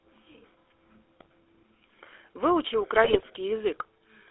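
Speech runs through a GSM full-rate codec for the whole clip, confined to roughly 300 Hz to 3.6 kHz with a plainly audible buzzy, gravelly roughness that fits the 13 kbit/s pulse-excited coder. Unlike plain band-limiting, the grain sits inside the voice itself. GSM bit errors break in at 1.20–1.26 s and again, longer and harsher, at 3.04–3.23 s. Corrupted decoder parameters twist the spectrum and level into squawks and gargling, not the silent gaps of lost packets.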